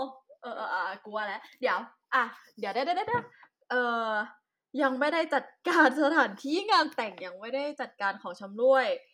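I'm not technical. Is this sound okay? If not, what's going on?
Yes, nothing stood out as a problem when listening to this recording.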